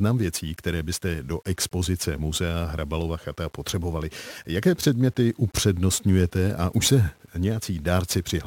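Across the whole speech clip there is a grainy, rough distortion that clings to the sound and shifts with it, turning the quieter stretches gritty, while the softest moments drop to silence or sputter between two steps instead of fading smoothly. The likely cause is low bit depth without dither: values rounded to about 9 bits with no added noise, so the error tracks the signal and sits roughly 40 dB below it.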